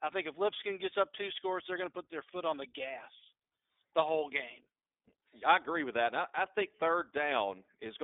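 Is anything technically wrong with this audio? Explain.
Yes. Throughout the clip, the speech sounds thin, slightly rough and synthetic, with nothing above 3.7 kHz and a narrow 200 Hz to 3.6 kHz band. This is plainly audible iLBC codec damage. Each 20 ms frame is coded independently at a low rate, which fits the 15.2 kbps mode.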